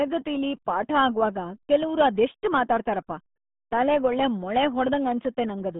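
From start to finish the speech sounds muffled and gargly, squeezed into a narrow band from about 150 Hz to 3.6 kHz with nothing above 4 kHz. This is heavy RealAudio 14.4 codec damage. Coarse low-bitrate coding, consistent with an 8 kbit/s stream, smears detail.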